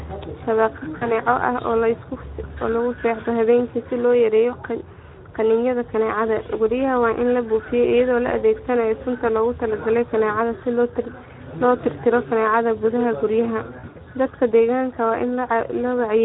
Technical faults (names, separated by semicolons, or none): Speex codec; VoIP packet loss concealed by the speech codec